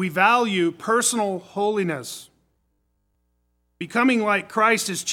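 From 2.53 to 3.15 s the sound turns into robotic sound from repeated short buffers: a rigid, metallic buzz at 50 Hz replaces the natural texture while still loosely tracking the original contour. The likely cause is audio arriving too slowly, so the playback side loops the most recent fragment to fill the gap. A 50 Hz buzz fits a fragment about 20 ms long, and around two fifths of the passage appears to be repeated material rather than new audio.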